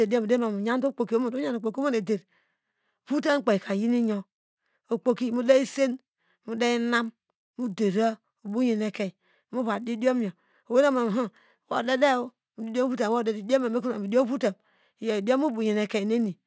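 From start to end the speech carries a faint 50 Hz buzz, heard only while sound is present. It comes from a resampler restarted on every block, pointing to a 24 kHz to 16 kHz conversion, which leaves an error at each 20 ms block edge. A spectrogram shows vertical lines every 20 ms, and the waveform shows small steps there.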